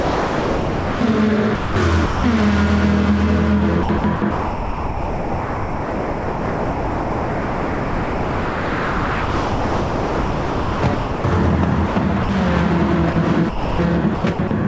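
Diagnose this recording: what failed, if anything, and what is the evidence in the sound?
From the start to 1.01 s the sound is missing, replaced by steady, even background noise until the real signal cuts in. This is sound dropped by the voice detector in call processing. The sender likely classed the opening as background and stopped transmitting, and the receiver filled the gap with comfort noise.

Over 1.55–2.24 s, 3.83–11.24 s, 11.87–12.29 s and 13.13–14.51 s the sound turns choppy. Fragments vanish, with about 7 s lost inside the long middle stretch. This is sound chopped by the voice detector, likely switching transmission on and off repeatedly, with comfort noise patched into each gap. The band also stops at 8 kHz throughout, which fits the G.722 call codec at 64 kbps.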